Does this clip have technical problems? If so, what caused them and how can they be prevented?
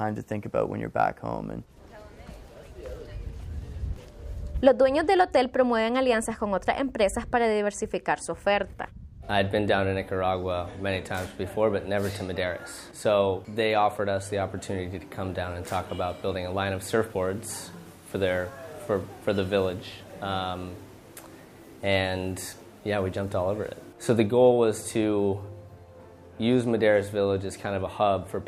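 Yes. At 3.96 s a single low thump is heard while the sound carries on unaffected, the mark of a DC step. The waveform's zero line jumps abruptly by about -35 dBFS, as happens when a converter recalibrates or an input carrying an offset is switched in. The offset then drains away rather than holding, since a 20 Hz high-pass in the chain pulls the baseline back to zero. Preventing it means avoiding input switching or recalibration during recording and using converters or preamps with stable, well-trimmed DC offset.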